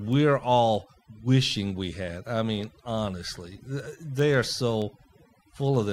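Overdone noise removal affects the whole clip. The noise reduction was set too hard. Frequency bands near the noise floor are pushed down or shut off, taking quiet parts of the speech with them. Gaps fall to near silence with twinkling specks.

Word clock ticks run from 0.13 s to 5.76 s. They come about every third of a second, some twenty in all. Sharp clicks of uneven strength repeat at a steady rate. The receiving device was not locked to the sender's clock. A small rate mismatch made their clocks slide past each other, dropping or repeating a single sample each time.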